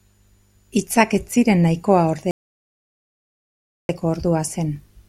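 From 2.31 s to 3.89 s the speech cuts off abruptly and the clip falls to total silence, an audio dropout to silence. It lasts about 1.58 s. There is no room tone in the gap, just silence. The speech then resumes mid-flow. Whatever was said during that stretch is lost. The likely cause is the input being interrupted, perhaps by a disconnected device, a failed link or a stray mute, while recording carried on.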